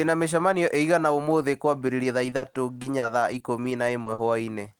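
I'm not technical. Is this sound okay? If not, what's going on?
No. From 1.87 to 4.42 s the speech suffers repeated packet loss (robotic sound): small chunks of audio never arrived in time, nine times in that stretch, the longest gap 60 ms. Each time, the system covered the hole by stretching out the sound just before it, patching in something like 0.4 s in total. Because the gaps come close together, the speech in that stretch sounds choppy, with bits missing.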